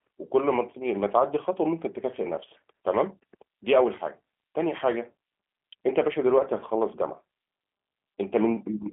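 Throughout, the speech is rebuilt from a vocal tract model and sparse pulses, showing clear G.729 codec damage. Nothing exceeds 3.5 kHz. It sounds rough and synthetic.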